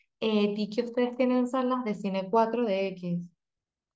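Nothing technical stands out in this short speech recording; there are no dropouts, clicks or glitches to point to anywhere along it.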